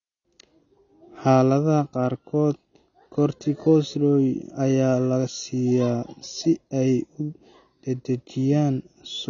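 Throughout, the speech sounds dull and smeared, with nothing above 6.9 kHz and fizzy sibilants, likely from AAC compression at a low bitrate near 24 kbps.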